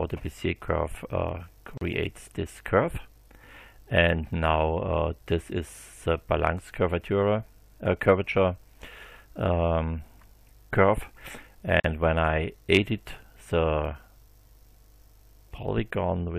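Twice the audio drops out into brief silence before carrying on exactly where it left off: a gap of about 38 ms at 1.78 s and another of about 44 ms at 11.80 s, each with softened edges. These are gaps at a join of encoded pieces. The material was encoded in separate sections and spliced without trimming, so each encoder's start-up delay and final-frame padding remain as dead air at the seams.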